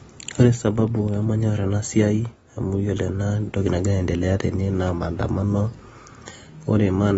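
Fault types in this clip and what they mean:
AAC compression: throughout, the speech has nothing above 7.7 kHz and sounds dull, smeared and warbly, likely from coarse AAC-LC quantisation at a low bitrate near 24 kbps.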